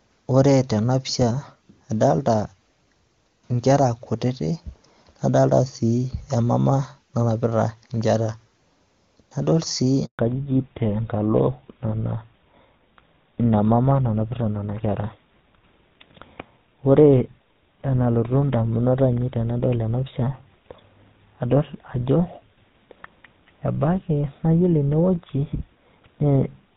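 At 10.05 s a handover gap opens as the call switches networks and no speech frames get through for 140 ms. The speech dies away almost instantly, leaving dead silence until 10.19 s, and whatever was said in that window is gone.

From 10.19 s to the end, the link falls back to narrowband. The clear, full wideband sound before the switch, which fits high-rate HD Voice, gives way to audio with nothing above 4 kHz. The speech turns dull, muffled and rougher, consistent with GSM full-rate coding.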